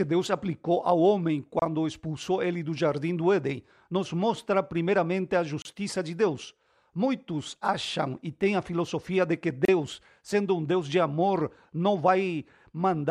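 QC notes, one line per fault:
1.59–1.62 s, 5.62–5.65 s, 9.65–9.68 s: gap at a join of encoded pieces. Speech drops out for about 27, 32 and 32 ms, every 4 s, after "aplicou ao homem", "nos mostra primeiramente a" and "a filosofia de que". Each separately encoded piece kept its start-up delay and end padding. Waveform shows flat-line dropouts with softened edges, and the spectrogram shows thin, full-band blank strips.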